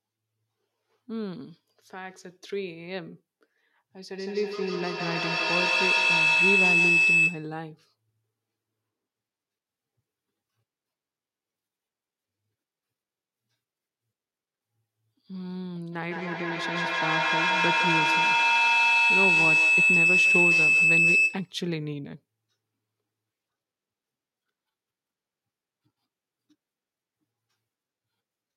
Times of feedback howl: 3.96-7.64, 15.92-21.63

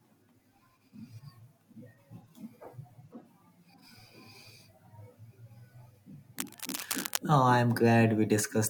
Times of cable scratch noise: 6.38-7.18

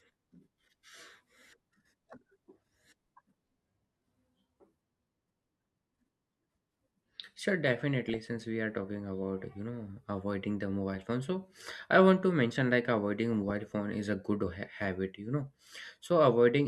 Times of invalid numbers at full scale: none

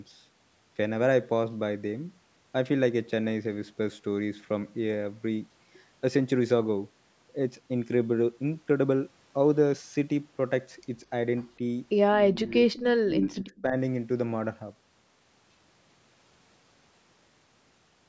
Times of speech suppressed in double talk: 12.15-12.55, 13.08-13.75

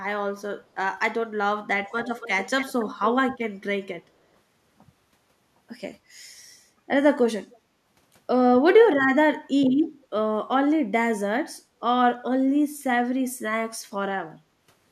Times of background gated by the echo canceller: 14.36-14.58

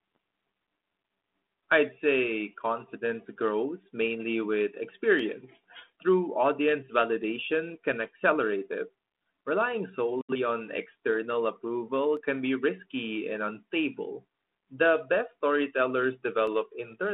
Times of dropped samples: 5.19, 12.17, 16.47

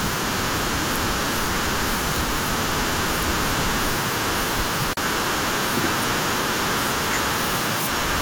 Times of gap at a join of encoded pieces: 4.93-4.97

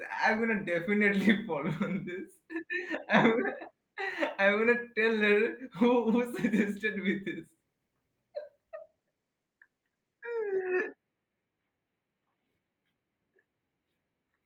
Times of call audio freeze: none

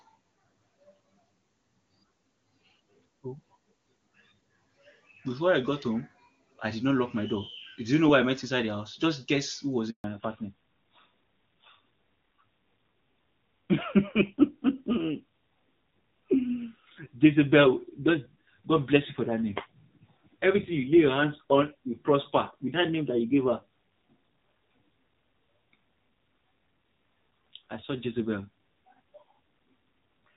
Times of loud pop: none

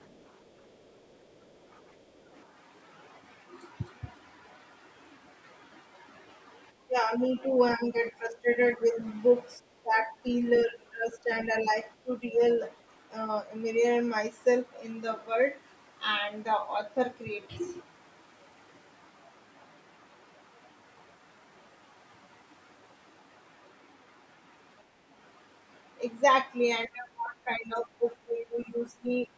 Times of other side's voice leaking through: 0.02-1.86, 2.21-2.32

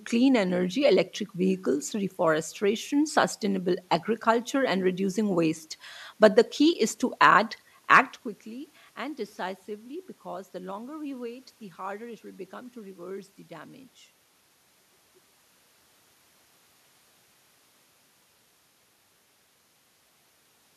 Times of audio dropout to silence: none

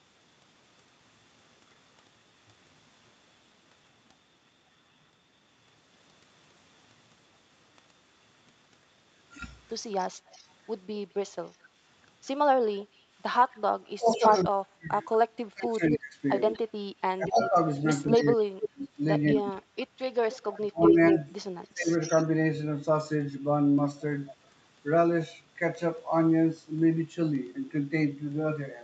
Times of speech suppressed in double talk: 13.80-16.16, 17.16-21.91

